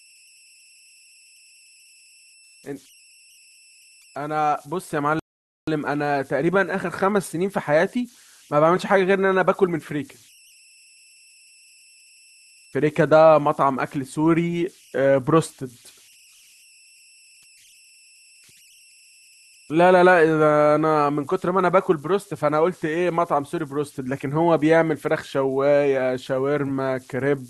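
A faint tone near 3 kHz runs from start to finish, with a grainy texture beneath the quieter passages. These are converter idle tones: an undithered delta-sigma converter, given only small input, cycles through repeating bit patterns that form tones, here about 32 dB below the signal.

At 5.19 s the audio drops to silence and picks up again at 5.68 s exactly where it left off. This is a rebuffering stall: the player ran out of downloaded audio and paused until more arrived, adding 481 ms without losing any speech.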